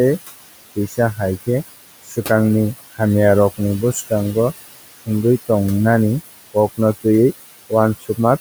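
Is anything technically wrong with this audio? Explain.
Yes. Throughout the speech, noise suppressor artifacts give the pauses an unnatural, pumping quiet. The suppressor pulls bands it judges to be steady noise down by about 17 dB, frame by frame, so the room noise, sitting about 12 dB under the speech, sinks between phrases and surfaces beneath them.

Speech cut by the noise suppressor occurs at 0.76 to 0.98 s, 2.03 to 2.3 s and 8.0 to 8.19 s. In each window, roughly 100 to 150 ms of soft speech sounds swallowed or faint, dropping by up to about 13, 18 and 16 dB respectively, because the suppressor mistook those quiet parts for background and turned them down.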